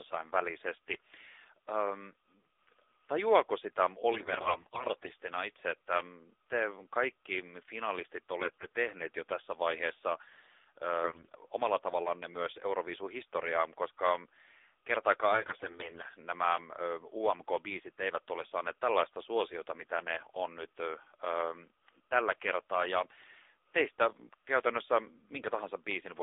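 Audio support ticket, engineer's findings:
AMR narrowband mobile codec across the whole speech clip. Band limited to 300 Hz to 3.7 kHz. Buzzy, synthetic timbre fits a low 7.4 kbps mode. Plainly audible codec damage.

AMR bit errors, four bursts. 4.14 to 5.12 s, after "tajuako sitä", before "itse että". 8.40 to 8.69 s, after "kaikki finalistit". 11.04 to 11.35 s, before "omalla tavallanne myös". 15.32 to 16.09 s. Pitch and level roughly hold, but the voice turns hoarse, scratchy and gargly. Cause is corrupted low-protection bits that still pass the checksum. Pulse positions and fine gain and spectrum values decode wrong. Damage suggests a heavy error rate, around one bit in seven, with a lighter burst at 8.40 s.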